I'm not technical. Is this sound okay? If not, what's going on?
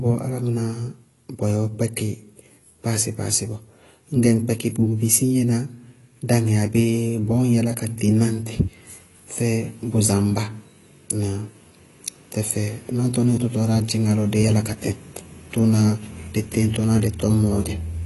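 No. Across the whole recording the speech sounds dull and smeared, with a fizzy, warbling edge on hissing sounds like s and sh. Nothing above about 11.5 kHz comes through, so the crisp top end is missing. This is likely AAC compression, a common way of shrinking audio files. Squeezed this hard, it throws away the highest frequencies and roughly approximates the rest, leaving clearly audible damage.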